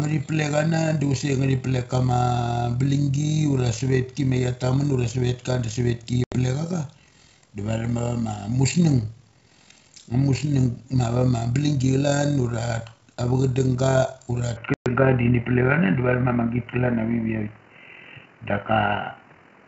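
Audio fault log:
throughout: overlap-add ripple. The level swells and dips by about 6 dB around forty times a second, a rough flutter rather than a slow pumping, because the frames are rejoined with an overlap whose window gains do not add up to a constant.
6.24–6.37 s and 14.74–14.87 s: packet loss on an ADPCM call. Hard-edged gaps of 80 ms and 120 ms cut the speech off abruptly. Each gap is followed by brief slight distortion while the decoder's predictor and step size fall back into step, unlike a plain dropout.
14.57–19.67 s: input switched to a poorer device. From here to the end the sound turns dull and boxy. The level shifts by about 5 dB and a new noise floor sits roughly 35 dB down, with no silence at the change. A change of microphone or headset profile is the likely cause. Unlike the G.722 path, which reaches up to 7 kHz, the band stops lower.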